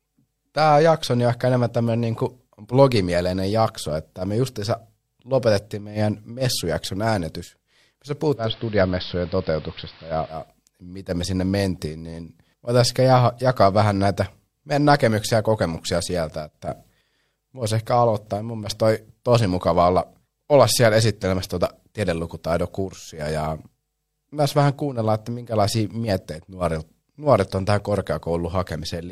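From 8.32 to 10.50 s the audio shows digital radio blending to analogue: the receiver cross-fades over about 0.24 s to the station's AM broadcast, and a spectrogram shows a hiss floor around 25 dB down.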